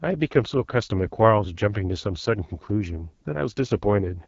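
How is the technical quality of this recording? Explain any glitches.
Quality is limited by plainly audible coding damage across the whole speech recording. Throughout, the speech sounds rough and raspy, with a buzzy, grainy edge and a thin, hissy top. This is the AMR wideband (HD Voice) codec running at a low rate, which fits its 8.85 kbit/s mode. At that rate the pulse-driven vocal tract model has too few bits to follow the voice accurately, and the band above 6.4 kHz is filled with shaped noise rather than real detail.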